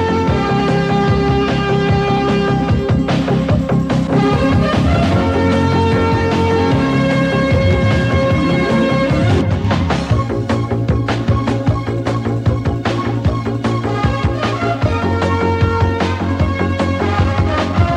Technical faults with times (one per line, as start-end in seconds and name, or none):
none